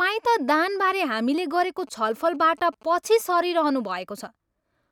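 A galloping dit-dit-dit of short 217 Hz buzzes runs under the speech from 1.79 to 3.30 s, roughly 25 dB below it. These are GSM signalling bursts: a nearby 2G phone's radio bursts, rectified by the audio circuitry, which points to the phone signalling rather than in a call.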